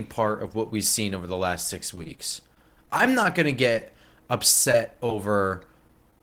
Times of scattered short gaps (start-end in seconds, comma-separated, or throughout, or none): 1.95-6.21